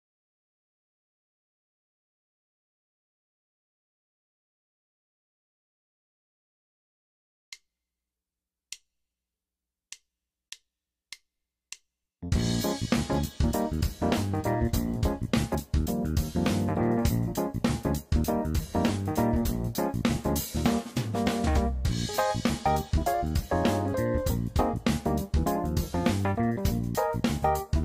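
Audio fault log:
15.54 s, compressed frames skipped: a brief smeared blip where the sound suddenly lurches forward, missing roughly 70 ms of audio, with a soft join rather than a sharp click. A short run of encoded frames never reached the output, either absent from the stream or rejected by the decoder as corrupt, and playback resumed at the next good one. The size of the jump points to about three frames, and their overlap blurs the seam.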